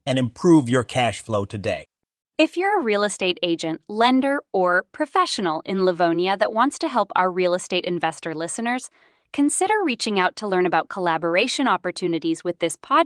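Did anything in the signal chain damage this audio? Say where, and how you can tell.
No, nothing in the chain has damaged this speech recording. The Opus voice compression is working normally: the band extends well above 8 kHz, with only the light coding texture expected from hybrid mode at a moderate rate, which fits a setting around 24 kbps.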